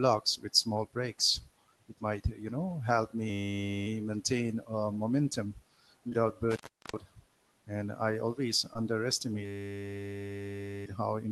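At 3.30 s a system hang loop sets in. The driver or machine stalled while the sound hardware kept replaying one 10 ms slice of its ring buffer. Until 3.87 s that slice repeats exactly, about 0.57 s of it, and a loop that short is heard as a steady, flat buzz at 100 Hz in place of the speech.

At 6.09 s, just after "maintain uh momentum", comes a short concealed packet loss. About 20 ms of audio never reached the decoder in time. The receiver filled the gap by extending the preceding sound and then blending back into the real signal by 6.13 s. The result is a brief smear or wobble rather than silence.

From 6.51 s to 6.99 s an intermittent contact appears, as if a loose plug or cable broke the circuit. The line stays open for about 0.37 s. The audio drops out with crackle at both edges, and faint hiss remains while it is open.

At 8.73 s, after "I always", a second concealed loss follows. 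Again about 20 ms went missing, and roughly 14 ms of synthesised fill covers it. The result is a brief smear or wobble, over by 8.77 s.

At 9.45 s the second system hang loop begins. A 10 ms buffer cycles at 100 Hz for 1.4 s, producing a sustained buzz. It ends at 10.85 s, just before "how important breaks".

Across the clip, the band-limited quality of the call path points to Opus at around 20 kbps with a bandwidth near 12 kHz.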